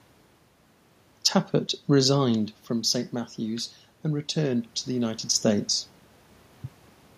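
From 2.28 s to 5.76 s, automatic gain rising is audible. The input level drops by about 9 dB as the talker moves away. The gain control slowly adds about 4 dB. Voice and room noise swell together over several seconds.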